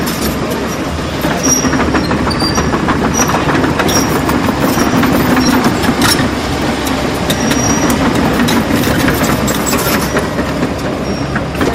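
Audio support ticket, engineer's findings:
Hard clipping throughout. Peaks sliced flat. A gain stage or converter was overdriven by about 11 dB, cutting roughly 3% of samples. The edge is bright and abrupt, unlike the rounded thickening of soft saturation.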